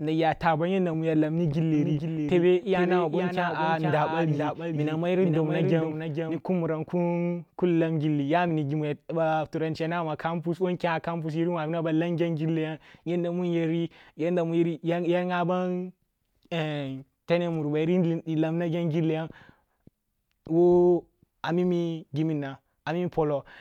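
From 1.74 to 6.40 s, just after "yanda mu ya lamni", a doubled audio track appears: a second full-band copy of the speech trails by about half a second, somewhat quieter, likely from a slower capture path. Unlike an echo, it has no decay or room colour, and it cuts in and out abruptly.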